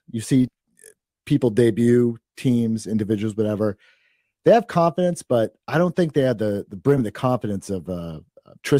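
At 0.47 s, 4.37 s and 6.97 to 7.01 s, just after "they had the the", compressed frames are skipped. The speech jumps ahead by whole 20 ms frames, roughly 40, 70 and 20 ms.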